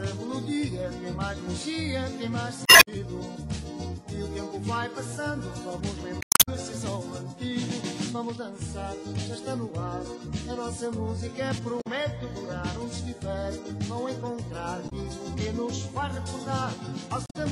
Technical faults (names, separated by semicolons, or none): damaged data in a compressed stream